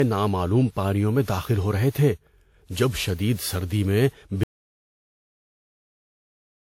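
Generation loss runs throughout the speech, from the first syllable onward. The sound is swirly and hollow, with smeared consonant attacks, and nothing reaches above about 19.8 kHz. This likely comes from the audio being decoded and re-encoded around seven times with a lossy codec. The character fits WMA at 96 kbit/s, with each pass requantising on a shifted frame grid so that noise and spectral gaps pile up.

An audio dropout to silence begins at 4.43 s and lasts to the end. The speech stops abruptly mid-flow and is replaced by dead digital silence with no room tone beneath it. Whatever followed is simply gone. The likely cause is that the input was lost, through a disconnected device, a failed link or an accidental mute, while the recorder kept writing silence.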